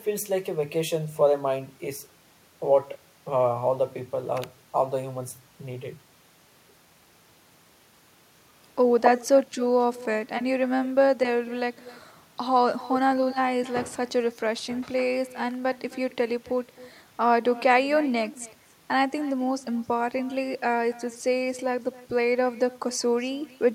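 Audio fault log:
Throughout: echo with no canceller. Every stretch of speech is followed roughly a third of a second later by a faint copy of itself, about 22 dB below the direct signal, sounding thinner than the original. The far end is evidently playing the call through a loudspeaker that its microphone picks up, and with no echo cancellation in the path, that pickup returns after the network round trip as a delayed shadow.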